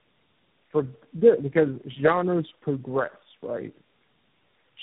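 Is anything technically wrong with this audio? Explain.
Yes. Throughout, tandem speech coding: the speech sounds re-encoded through about four successive codecs, each compounding the last one's damage, leaving it rough, muffled, warbly and cut off above 3.8 kHz.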